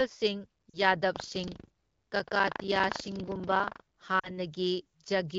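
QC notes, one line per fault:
0.69–0.81 s and 4.19–4.38 s, lost AMR speech frames: about 40 ms goes missing each time, which fits two dropped 20 ms frames. The decoder reuses the last good pitch and vocal tract settings at falling gain, so speech briefly fades to near silence before recovering weak or rough for a moment.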